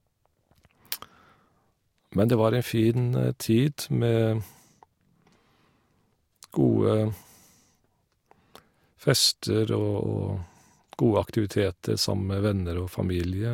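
No technical faults are audible.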